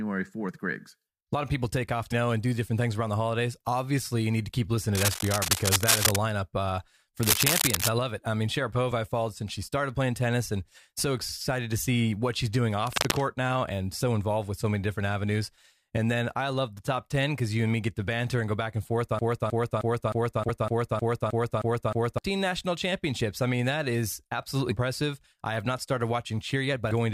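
At 2.11 s, between "of people take off" and "know and do different", damaged data in the compressed stream produces a short glitch: the decoder misreads a corrupted frame and resyncs on the next header. On a spectrogram it is a brief broadband vertical smear. The same blip recurs at 8.92 s, just after "love it I mean".

From 19.19 to 22.18 s a broken-record loop repeats one 0.31 s fragment ten times back to back, most likely because the stream stalled and resent its last buffered piece. The waveform shows identical repeating blocks, and the spectrogram shows a striped pattern, until "national championships I mean" resumes. A further corruption blip falls at 20.48 s inside the loop, with two more at 24.70 s and 26.90 s.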